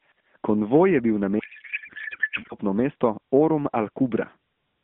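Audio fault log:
1.40–2.55 s: codec payload misread. Right after "je bil", the speech turns into garbled noise and warble that barely follows it, for just over a second before normal AMR narrowband sound returns. The fault sits in how the bits are packed: frames packed octet-aligned were unpacked as if bandwidth-efficient, so the decoder took valid-looking frames with every field shifted and rebuilt the wrong filter and pulse parameters. The surrounding light, phone-band coding fits AMR-NB at 12.2 kbps.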